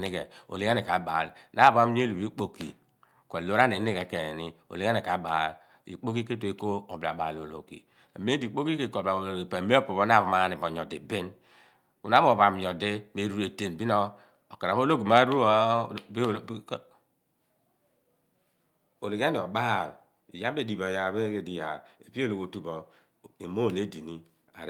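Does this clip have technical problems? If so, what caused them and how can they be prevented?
No, nothing in this recording points to a technical fault, so there is nothing to trace or prevent.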